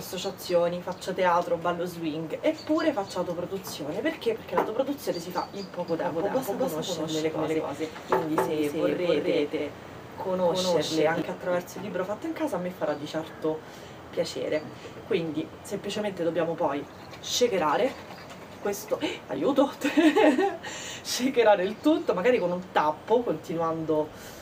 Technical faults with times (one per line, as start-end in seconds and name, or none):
5.88-11.22 doubled audio track